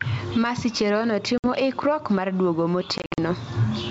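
Gain pumping runs through the whole recording: loud and soft parts are pulled closer in level and the sound is squashed, with the level swinging by roughly 15 dB, which is likely an input gain set far too high with a fast limiter clamping it.

Packet loss on an ADPCM call appears at 1.38 to 1.46 s, just before "ikruok mar duogo": 60 ms of audio, about three packets, drops to hard-edged silence. The speech returns slightly distorted while the decoder's predictor and step size resynchronise.

A second packet loss episode follows at 2.98 to 3.19 s, after "ikruok mar duogo", where 140 ms is lost in gaps scattered over 200 ms, the longest lasting 60 ms. Each gap ends with the same mistracked, slightly distorted restart. The G.722 wideband coding underneath keeps the surrounding speech clear.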